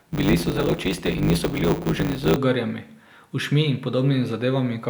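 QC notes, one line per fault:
0.00–2.37 s, block size mismatch (truncated): one stage hands over longer blocks than the next stage takes in, so the tail of every block is discarded. The regular cuts produce a buzz at 100 Hz, the block rate, and because part of each block is skipped the speech runs about 1.16 times fast while its timbre stays. The pattern fits a writing stage using 512-sample blocks.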